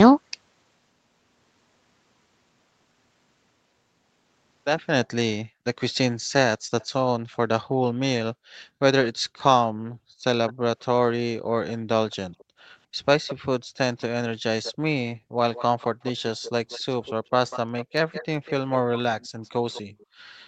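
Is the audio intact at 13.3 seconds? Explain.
No. From 13.27 to 13.35 s a faint, brief delayed copy of the speech surfaces, trailing the original by about 212 ms and sitting well below it. This is likely an echo leak: a loudspeaker-side echo canceller let part of its microphone pickup through.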